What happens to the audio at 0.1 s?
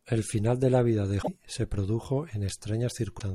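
Nothing goes wrong at 0.1 s; the speech plays through that moment intact, with no dropout, click or distortion.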